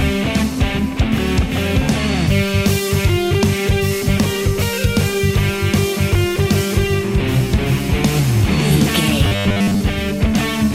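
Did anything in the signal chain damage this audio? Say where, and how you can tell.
Yes. From 9.27 to 9.81 s the sound collapses into a rigid, metallic buzz pitched at 100 Hz, still loosely tracking the audio's shape but frozen in tone. This is robotic sound from repeated short buffers, most likely at the driver or buffer stage: new audio arrived too seldom, so a 10 ms block was replayed over and over while the real signal was skipped, roughly two-thirds or more of that span.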